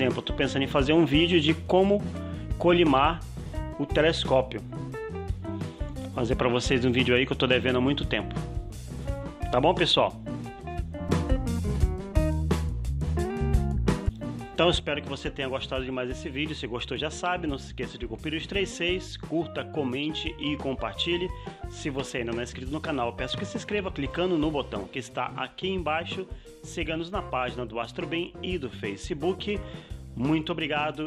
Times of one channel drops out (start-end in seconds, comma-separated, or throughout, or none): 14.80-31.06